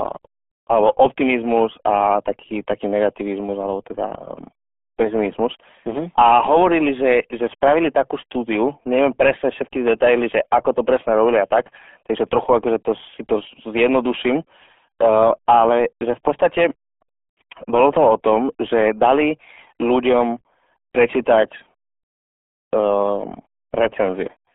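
From start to finish, the speech runs through the RealAudio 14.4 codec. Nothing above 3.6 kHz survives, and the low end thins below 300 Hz. Heavy coding damage leaves the speech muffled and gargly. That fits a very low bitrate, around 8 kbit/s.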